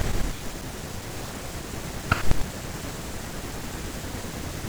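No technical faults can be heard in this speech recording. Nothing at any point in the clip points to a problem in how the audio was captured, processed or delivered.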